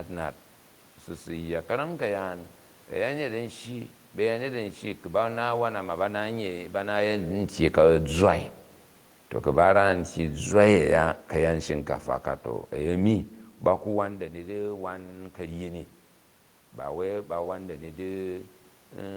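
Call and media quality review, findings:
Automatic gain falling, 7.62 to 13.28 s. AGC on capture path judged input too loud or its noise too strong, gain ramped down about 6 dB over roughly 5.7 s. Speech and room noise sink together, pointing to gain stage, not source. Level shifts near 7 s and 13.5 s are talker movement at the microphone and not faults; the room noise is part of the recording.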